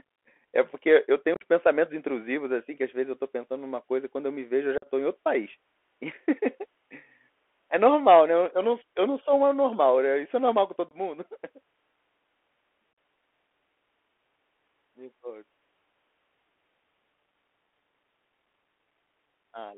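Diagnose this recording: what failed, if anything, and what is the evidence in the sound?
The damage sits at the codec stage. The whole clip is squeezed into a 300 Hz to 3.4 kHz telephone band with nothing above about 4 kHz, and there's a granular hiss under the speech and scratchy, overloaded s sounds. That's the Bluetooth CVSD headset codec, which fits a 64 kbps CVSD stream where the one-bit adaptive step can't keep up with loud high-frequency content.

On top of that there's unconcealed Bluetooth headset packet loss on the radio link between the headset and the phone. Hard-edged holes show up at 1.34 to 1.44 s, right after "eu tenho", where about 52 ms goes missing in bits across 60 ms. More follow at 4.78 to 4.88 s after "eu me vejo eu" (45 ms), at 10.89 to 10.94 s after "é normal com" (22 ms), and at 12.93 to 12.98 s (45 ms). Each gap points to a handful of lost packets, filled with silence or an idle pattern instead of being concealed.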